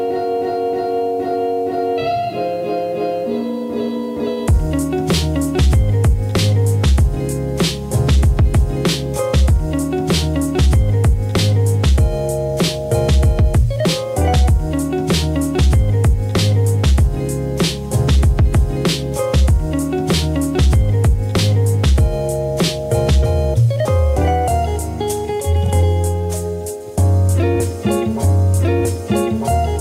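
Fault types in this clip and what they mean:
Low bit depth without dither: The error is present for the whole clip. It sits roughly 40 dB below the signal and moves with it rather than staying independent. Quiet passages take on a grainy edge, and the lowest-level detail breaks up or sputters instead of fading smoothly. The likely cause is coarse requantisation with plain rounding and no dither, which fits about an 8-bit signal path.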